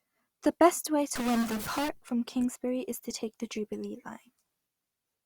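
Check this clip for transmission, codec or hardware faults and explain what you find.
A single hardware-type fault shows up in this speech clip. A stuck bit runs from 1.16 s to 1.89 s, starting just after "best way". One bit of the sample data seems pinned to a fixed value, likely from a broken data line or a faulty converter. That pushes roughly half the samples off by that bit's weight in a pattern that follows the waveform. The result is distortion over the sound, and the quieter moments fill with noise.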